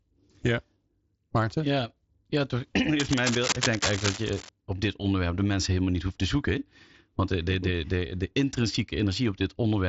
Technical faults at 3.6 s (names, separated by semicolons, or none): cable scratch noise